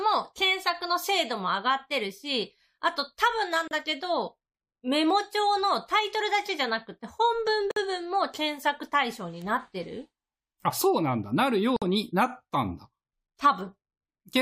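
At 3.54 s there is a bit error spike. A flipped bit made two adjacent samples jump by a power of two and snap back. It is heard as one sharp tick across the whole spectrum, unrelated to the speech. A second tick comes at 9.42 s.

A gap at a join of encoded pieces opens at 3.68 s, lasting 34 ms. Others follow at 7.71 s and 11.76 s, each 53 ms, spaced 4 s apart. Separately encoded pieces were joined untrimmed, leaving encoder delay and end padding. The speech briefly drops out, then resumes where it stopped.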